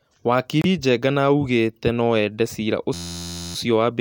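At 0.62 to 0.66 s there is a brief disturbance of about 40 ms, the mark of damaged data in a compressed stream. Part of the encoded stream was corrupted, so the decoder could not read the frames in that span, lost its frame alignment and had to search forward for the next valid frame header. What reaches the ear is a short disruption of the speech before normal decoding resumes.

Right after "augete nũ ende cira", from 2.94 to 3.55 s, a system hang loop sets in. The host or driver stalled while the audio hardware kept replaying the same small ring buffer, so one 11.61 ms slice of speech repeats exactly, roughly fifty times over. That slice length fits a 512-sample buffer, and the 86.1 Hz repeat rate is fast enough that the repetition fuses into a steady, flat buzz at that pitch rather than a stutter. When playback recovers, the speech appears to carry on with essentially nothing skipped.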